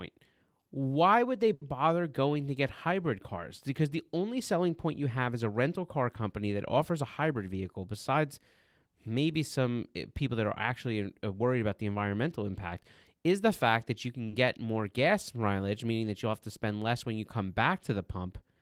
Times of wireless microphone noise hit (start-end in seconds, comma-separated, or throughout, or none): none